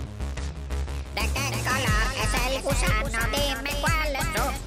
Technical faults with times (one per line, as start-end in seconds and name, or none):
0.00-4.67 doubled audio track